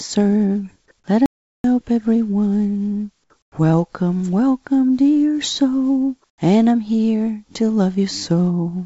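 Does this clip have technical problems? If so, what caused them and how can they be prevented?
Yes. The player likely ran short of data or had its thread blocked, causing a playback stall: the output goes silent from 1.26 to 1.64 s, a gap of about 0.38 s, and then the sound resumes. A larger playout buffer and a playback thread that nothing else can block would prevent this.

The sender's discontinuous transmission likely judged the quiet background to be silence and stopped sending audio, so the receiver put comfort noise in place of the background. From 3.42 to 3.52 s the background drops by about 18 dB, and from 6.30 to 6.38 s by about 14 dB. Both times it turns into a smoother synthetic noise. Disabling discontinuous transmission, or making the voice detector less aggressive, would keep the real background.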